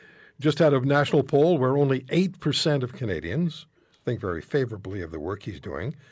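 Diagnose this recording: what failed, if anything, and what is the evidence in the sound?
The room tone behind the speech dips out abruptly at 3.53–4.01 s, 4.68–4.82 s, 5.18–5.59 s and from 5.92 s to the end, falling by about 40 dB each time. This is background gated by the echo canceller in the call processing, which pulls the microphone down hard while the far-end loudspeaker plays.

At 5.62–5.66 s a very faint, brief copy of the speech appears about 259 ms behind the original, far below the direct sound. This is likely an echo leak: the far side's echo canceller missed part of what its microphone picked up from its loudspeaker and sent it back down the call.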